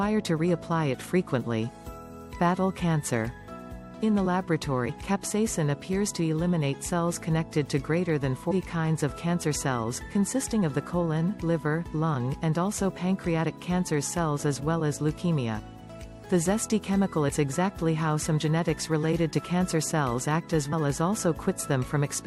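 Four brief glitches break into the sound at 4.88 s, 8.50 s, 17.28 to 17.30 s and 20.71 s, each lasting about 20 ms. They come from damaged data in the compressed stream: at each spot the encoded bytes were corrupted, so the decoder misread the affected frame, lost its place in the bitstream and had to hunt for the next valid frame header before normal decoding resumed.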